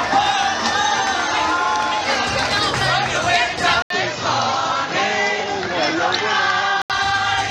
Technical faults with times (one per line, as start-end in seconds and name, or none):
3.82-6.90 input switched to a poorer device